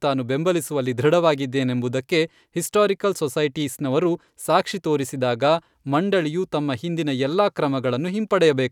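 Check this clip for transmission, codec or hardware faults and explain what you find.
No transmission, codec or hardware faults turn up in this clip.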